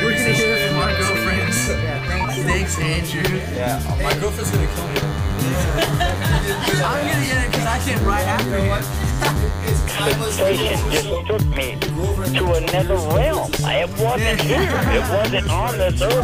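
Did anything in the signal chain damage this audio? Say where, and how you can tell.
Yes. From 4.43 s to 10.95 s a thin, steady buzz sits under the audio, with a 100 Hz fundamental and a dense stack of harmonics. It runs around 15 dB below the programme. This is DECT cordless phone buzz entering at the analogue stage. A nearby DECT handset or base transmits a radio burst every 10 ms. The audio circuit rectifies those bursts, turning the pulse train into audible buzz.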